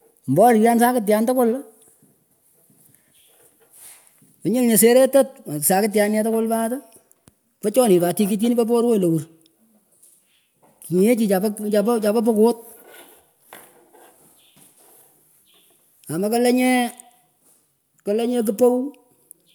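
Listening through the speech recording, nothing stood out as a technical problem at any point.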